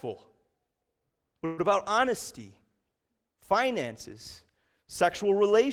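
Packets were most likely held up in transit for a moment around 1.45 s, so the jitter buffer ran dry and the receiver had nothing new to play. This call audio freeze lasts until 1.60 s. The receiver stretches the last bit of speech into a brief fading buzz or hiss for about 123 ms, never dropping to silence. When the packets arrive, the speech resumes where it stopped, with nothing lost, but from then on it runs about 123 ms behind.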